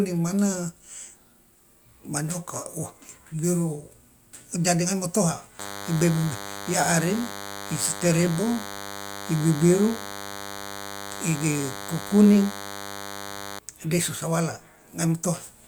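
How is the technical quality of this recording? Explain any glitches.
The speech has one clear problem: DECT cordless phone buzz from 5.59 to 13.59 s. A nearby cordless handset or base is pulsing radio bursts 100 times a second, and the audio circuitry rectifies them into a thin, steady 100 Hz buzz full of harmonics, sitting roughly 15 dB below the speech.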